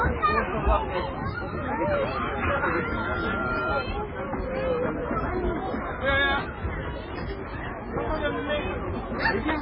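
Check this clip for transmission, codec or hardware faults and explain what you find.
Two problems stand out. The whole clip is dull and watery, with nothing above 5.3 kHz, and weak detail seems to flicker in and out, giving a swirly, metallic edge to anything bright and soft, smeared attacks. That's most likely heavy MP3 compression at a very low bitrate, something like 16 kbps. Short on bits, the encoder chops off the treble at a fixed point and drops quieter frequency lines frame by frame, so they switch on and off.

From 1.33 to 3.85 s there's a loudspeaker feedback squeal, a steady 1.4 kHz tone that swells over about two seconds until it's roughly as loud as the sound itself. A microphone is picking up the speaker it feeds, and at 1.4 kHz the loop gain tops one, so that frequency keeps feeding on itself and grows into a howl before it's cut off at 3.85 s.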